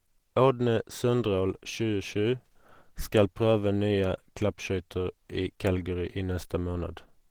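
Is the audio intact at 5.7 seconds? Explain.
No. At 5.7 seconds the speech carries the same muffled, hoarse, grainy coloration it has throughout, likely Opus compression at a low rate near 16 kbps, where the hybrid speech mode approximates detail with coarse band energies and noise fill instead of the original fine structure.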